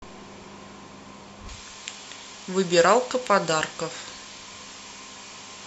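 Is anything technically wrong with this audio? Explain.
Yes. From 1.49 s to the end, pre-emphasis is left on. Treble boosted for transmission was never cut back, roughly 11 dB at 10 kHz. Speech turns thin, bright and sibilant.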